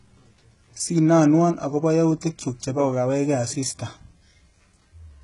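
A speech recording with heavy HE-AAC compression damage across its whole length. The treble sounds bright but false, and s sounds come out gritty and metallic. That points to the likely cause, spectral band replication: only the lower band is truly coded, and the upper band is rebuilt by copying it upward, so its harmonics don't line up. Content stops at about 11.1 kHz, and the coarseness fits a bitrate around 12 kbps. Plain low-bitrate coding would sound dull and muffled instead.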